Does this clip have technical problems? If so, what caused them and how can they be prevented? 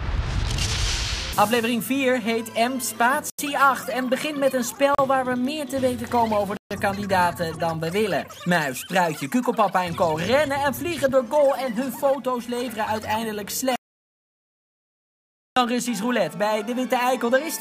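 Yes. Three short gaps at 3.30 s (87 ms), 4.95 s (36 ms) and 6.57 s (138 ms) are likely Bluetooth stalls. Radio interference delayed packets, the headphones' buffer emptied, and playback halted until the retransmissions arrived, then resumed where it stopped or slightly later. On a waveform each appears as an abrupt flat-line notch; a spectrogram shows thin vertical blank strips. Keeping the phone close and clear of other 2.4 GHz traffic prevents this.

From 13.76 s to 15.56 s, about 1.81 s of audio is replaced by silence in an audio dropout to silence. The input was likely lost through a disconnected device, a broken link or an accidental mute, while recording carried on writing silence. The waveform drops to a flat line mid-flow with no room tone, and the spectrogram goes completely blank for that stretch. Anything in that span is gone. Securing connections and monitoring input levels while recording prevents this.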